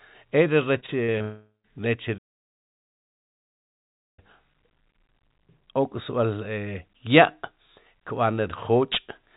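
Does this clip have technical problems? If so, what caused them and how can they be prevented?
Yes. From 0.8 to 1.22 s the speech turns choppy and robotic, with pieces missing. This is repeated packet loss: five short gaps, the longest 40 ms, were each patched by stretching the previous sound, covering about 29% of that span. A larger jitter buffer or forward error correction would prevent it.

From 1.22 to 1.66 s the sound smears into a fading buzz, then falls silent for about 0.13 s before resuming with roughly 0.42 s of speech gone. This is likely a long network dropout, where the receiver extended the last sound until there was nothing left to continue. A more stable connection would prevent it.

From 2.17 to 4.19 s the output simply stops for about 2.0 s mid-flow, then picks up again. This points to a playback stall, likely the player running out of data or its audio thread being blocked. 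Keeping the audio thread at high priority and its buffer filled would prevent it.

The audio is also narrowband, with nothing above 4 kHz, as expected from the 64 kbps G.711 mu-law call codec.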